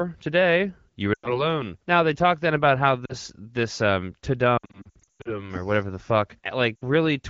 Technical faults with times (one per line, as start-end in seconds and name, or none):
1.13-1.53 lost AMR speech frames
3.05-3.15 lost AMR speech frames
4.58-5.51 lost AMR speech frames
6.76-6.82 lost AMR speech frames